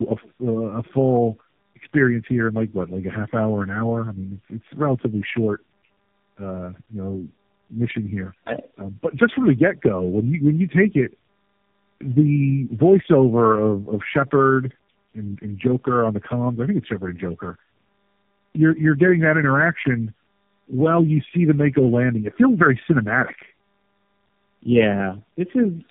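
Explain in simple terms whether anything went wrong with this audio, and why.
Something did go wrong, across the whole clip: tandem speech coding. The speech sounds rough, warbly and muffled, with nothing above about 3.7 kHz. That fits the call being squeezed and unpacked by three phone-network speech codecs in a row, each degrading the previous one's output.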